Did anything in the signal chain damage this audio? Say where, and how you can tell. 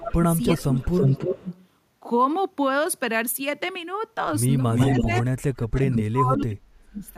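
Yes, it's in the call processing. There's an echo leak: a delayed copy of the speech at 0.00–0.11, 0.44–1.64, 4.70–5.22 and 5.63–6.03 s, trailing by about 330 ms and sometimes as loud as the original. Likely a speakerphone's echo canceller letting its loudspeaker pickup through.

The speech is also suppressed in double talk, from 0.09 to 1.46 s and again from 4.90 to 7.03 s. The talker dips by about 20 dB, then about 40 dB later, in pieces adding up to about 0.7 s and then 1.5 s. That's likely the canceller ducking everything while both sides talk.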